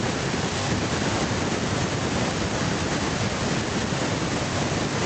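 Nothing technically wrong can be heard in this speech recording. A faint room background sits about 36 dB below the speech, and the high end stops near 8 kHz, which fits the audio having passed through a call codec such as Opus.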